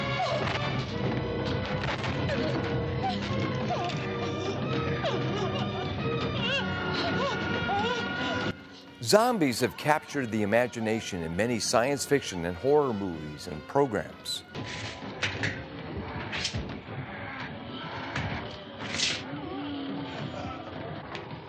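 No technical faults are audible anywhere in the recording.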